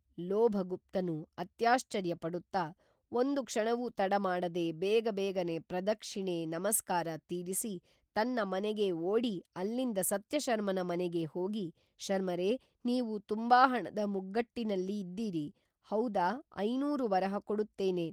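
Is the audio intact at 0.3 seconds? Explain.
Yes, the audio is intact at 0.3 seconds, with no fault at that moment.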